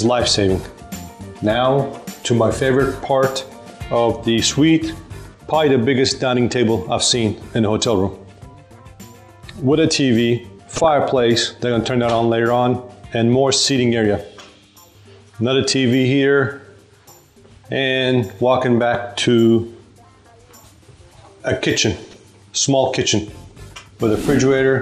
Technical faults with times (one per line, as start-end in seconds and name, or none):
0.00-24.81 MP2 compression
10.76-10.93 DAB burbling
22.04-22.18 DAB burbling